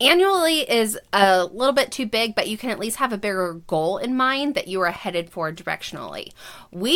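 Nothing in the speech stands out as a technical fault; there's nothing here to flag.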